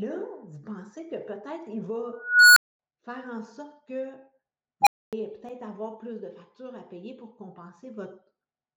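At 2.13 s an unstable filter runs away. A tone near 1.5 kHz swells over about 430 ms, clips, then drops into 230 ms of silence by 2.79 s. At 4.82 s it recurs near 700 Hz, peaking within 47 ms and cutting to 260 ms of silence.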